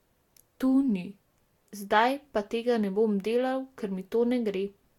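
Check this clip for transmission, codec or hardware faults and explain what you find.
There is one codec fault, present from start to finish: generation loss. Throughout the speech, the sound is swirly and hollow, with smeared, soft-edged attacks and nothing above about 18.7 kHz. The smearing is heavier than a single pass at the rate the band limit suggests, around 69 kbit/s Vorbis, would explain. The likely cause is repeated decoding and re-encoding, roughly four passes. Each pass quantises again on a shifted frame grid, so noise and spectral gaps accumulate.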